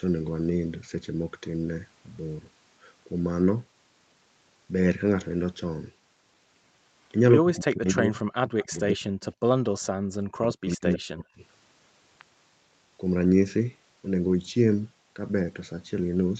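From 7.41 to 8.19 s the speech dips by up to about 20 dB, across roughly half a second. It dips again from 8.47 to 8.74 s, this time by up to about 40 dB. This is speech suppressed in double talk. The likely cause is an echo canceller that heard both sides at once and turned both down. At 8.59 to 8.79 s a faint, delayed copy of the speech appears underneath, about 25 dB down and 112 ms late. This is an echo leak. It is most likely a loudspeaker echo that the far side's canceller failed to remove. Shorter scraps follow at 9.21 to 9.25 s and 9.80 to 9.86 s, about 30 and 35 dB down. From 10.22 to 11.41 s the speech is suppressed again, by up to about 40 dB, for roughly a second in total. Inside that stretch, from 10.67 to 10.99 s, the echo returns louder, only about 15 dB below the speech. It now lags by 91 ms.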